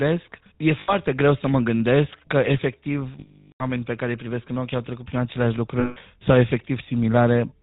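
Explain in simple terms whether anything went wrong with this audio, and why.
Two things went wrong here, and both come from a phone-style link.

The whole clip has been through the GSM full-rate codec, the original mobile phone speech coder. It rebuilds the voice from a simple model of the throat and mouth, fed by a coarse, thinned-out pulse signal, and throws away everything above 4 kHz. So the speech sounds muffled and clearly buzzy and gravelly from start to finish, not just in places.

On top of that there are three spots with lost GSM frames. When chunks of the signal go missing, the decoder fills the gap by repeating the last good chunk and letting it fade, so you get a short rough, metallic ring instead of speech:

0.8 to 0.95 s, about 80 ms, just before "greu să mă".

3.2 to 3.64 s, about 400 ms, between "că efectiv" and "pe care îi privesc". This gap is long enough that the ring dies away into silence before speech returns.

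5.8 to 5.97 s, about 160 ms, right after "au trecut prin aceleași".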